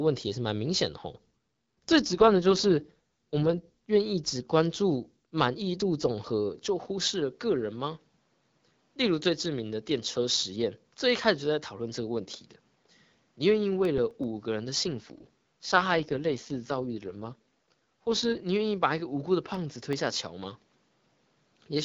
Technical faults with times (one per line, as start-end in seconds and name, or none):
2.00-3.67 AMR rate drop
6.65-21.84 input switched to a poorer device
13.85-14.24 CD scratch ticks
14.85-18.44 AMR rate drop
19.54-20.06 CD scratch ticks